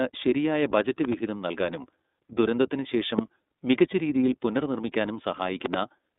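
Speech passed through the iLBC codec for its whole length: the band runs only from about 200 Hz to 3.7 kHz. Each 30 ms frame is coded on its own, which fits a 13.33 kbps mode and leaves a plainly rough, synthetic edge. Three loud pop events sit on top of the speech, which continues underneath. The first is a double pop at 1.05–1.15 s, about 10 dB above the signal, after "ശരിയായ ബജറ്റ്". The second is a single pop at 3.19–3.21 s, about 20 dB up, before "മികച്ച രീതിയിൽ പുനർനിർമ്മിക്കാനും". The third is another double pop at 5.66–5.76 s, about 20 dB up, after "ശേഷം മികച്ച രീതിയിൽ പുനർനിർമ്മിക്കാനും". These are likely voltage steps from a plug, a switch or a driver glitch.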